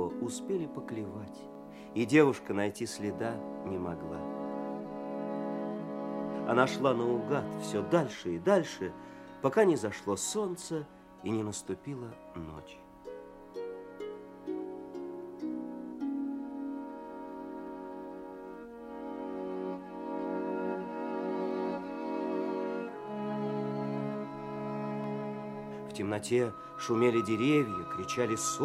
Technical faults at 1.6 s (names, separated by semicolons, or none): dropped samples